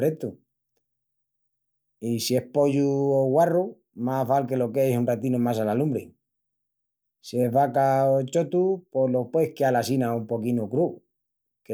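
A speech recording with no technical fault audible anywhere in it. There is nothing here to place at a particular time or trace to a cause.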